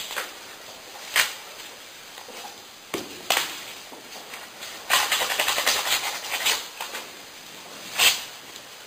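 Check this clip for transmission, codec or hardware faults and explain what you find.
One fault runs through the whole clip: imaging from sample-and-hold upsampling. The audio was raised to a higher rate by repeating each sample with no smoothing filter, which fits a source at about 11 kHz. Mirrored copies of the spectrum therefore sit above the original band, the lowest filling roughly 5.5 to 11 kHz at about 7 dB below the signal. This adds a bright, metallic fizz that rises and falls with the sound.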